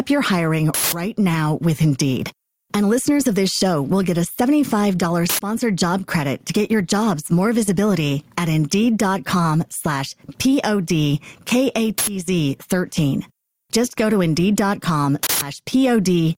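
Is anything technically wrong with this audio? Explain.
Yes. Throughout the clip the level breathes, with a swing of roughly 15 dB. Loud and quiet passages sit unnaturally close together and everything sounds squashed. This is gain pumping, most likely from input gain set far too high with a fast limiter or compressor repeatedly clamping it down whenever a peak arrives.

There are also four short, loud bursts of harsh digital noise, at 0.74 to 0.93 s, 5.29 to 5.39 s, 11.98 to 12.07 s and 15.23 to 15.42 s. The first and last last about 186 ms, the middle two about 93 ms, which fits whole blocks of 8192 and 4096 samples. These are uninitialised buffer faults. A block was played out before real audio had been written into it, so whatever stale memory it held was reproduced as samples.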